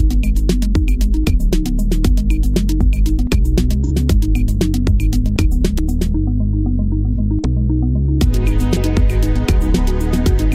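AAC frame loss with concealment appears twice, at 3.85 to 3.92 s and again at 7.13 to 7.20 s. Each gap lasts about 43 ms, which fits a single missing frame. The decoder has nothing to play there, so it rebuilds the gap from the last good spectrum, reusing its energy with altered phase. Each instant therefore comes through as a brief smeared, noisy patch rather than a clean dropout before the audio resumes.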